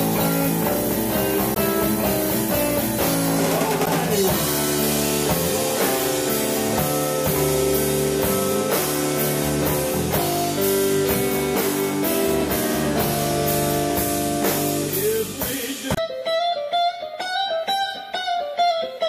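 At 1.53 s, 3.83 s and 15.93 s the audio breaks into a short chirp or blip lasting roughly 45 to 50 ms each time, the signature of damaged data in a compressed stream. At each point, part of the encoded data is corrupt, so the decoder misreads or discards the affected frames, loses sync and has to search for the next valid frame header before normal playback resumes.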